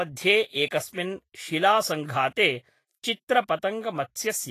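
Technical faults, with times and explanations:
Throughout, Vorbis compression: the speech carries a grainy, hissy treble and roughened tones, with nothing above 14.2 kHz, likely from Vorbis coding at a low setting that fits about 32 kbps. The encoder keeps a smooth spectral floor but quantises the high-band residue so coarsely that fine detail turns into noise of similar energy. A plain low-pass filter would leave the remaining treble clean, whereas here it fizzes and the consonant attacks blur.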